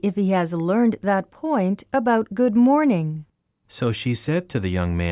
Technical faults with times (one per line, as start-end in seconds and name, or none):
none